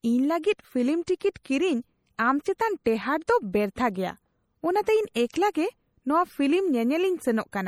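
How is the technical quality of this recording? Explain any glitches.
The recording is clearly degraded, with lossy-coding damage throughout the speech and two short pre-echoes just after five seconds.

MP3 compression is the likely cause of the watery, swirling texture and plainly audible artefacts across the whole clip, consistent with roughly 48 kbps encoding. Weak frequency lines switch on and off between frames, appearing on a spectrogram as flickering, patchy holes, with nothing above 20.8 kHz.

Pre-echo occurs at 5.31 to 5.34 s (spreading 31 ms) and at 5.53 s (18 ms). The codec spreads quantisation noise across a whole block, so noise meant for a sharp attack leaks into the silence before it. You hear a short hiss ahead of each onset, and the waveform shows a low noise smear preceding the transient.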